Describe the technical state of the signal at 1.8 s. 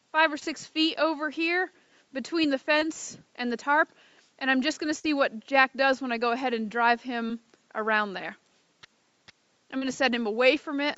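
At 1.8 s the audio is intact, with no fault present; like the rest of the call-path signal, it carries nothing above about 8 kHz.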